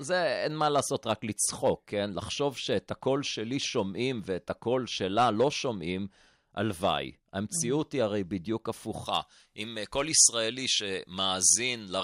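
At about 9.06 s, right through to the end at 12.03 s, the speech suddenly turns thin and hissy. That's pre-emphasis left on. The top end was boosted for recording or transmission and the matching de-emphasis never got applied, so the treble sits about 11 dB hot at 10 kHz relative to 1 kHz, which fits a J.17 curve. Sibilants spit, and the body of the voice drops away.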